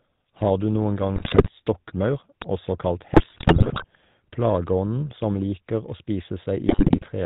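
Throughout, the speech carries the GSM full-rate codec's buzzy, gravelly roughness, with nothing above 4 kHz. That fits the 13 kbps GSM full-rate codec.

From 1.16 to 1.49 s, after "noen gang" and before "stokkmaur også kalt", GSM bit errors corrupt the decoder's parameters. The speech breaks into squawks and gargling.

From 2.42 to 2.44 s, just before "også kalt", a single loud pop lands about 15 dB above the speech. Its likely cause is a voltage step from a switch or glitch.

More GSM bit errors follow from 3.14 to 3.85 s, after "stokkmaur også kalt" and before "plageånden som liker å". They sound as pops and a warped spectrum.

A last burst of GSM bit errors runs from 6.67 to 7.07 s, bringing the same gargling breakup.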